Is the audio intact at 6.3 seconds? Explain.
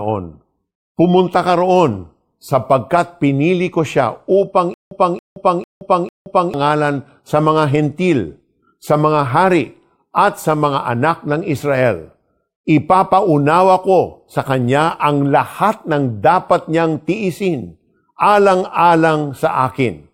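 No. From 4.74 to 6.54 s, just after "pinili ko siya upang", playback likely stalled and retried, giving a stutter with silent gaps: a 277 ms fragment repeats four times, each followed by 173 ms of dead silence, every 449 ms, while the intended speech is lost.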